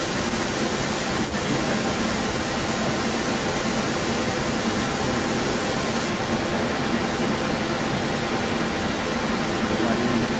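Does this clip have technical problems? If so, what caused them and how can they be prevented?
Yes. An echo leak runs through the whole recording, from 0.0 to 10.4 s. A second copy of the speech trails the original by about 300 ms. The echo is roughly 5 dB louder than the speech itself. The likely cause is a far end on loudspeaker whose echo canceller failed to remove what its microphone picked up. The call audio stops at 8 kHz. Using a headset at the far end would prevent this.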